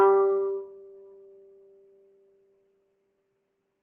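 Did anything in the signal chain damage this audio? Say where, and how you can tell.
Yes. The damage sits in the call-processing stage, where a noise suppressor meant for speech was left running over this music. It lasts the whole clip. Attacks mostly come through, but held tones and decay tails sink soon after. Sustained parts swing in level by roughly 20 dB, so the music pumps and thins. The suppressor treats steady, stationary content as background noise and pulls it down. It lets transients pass because they look like foreground sound.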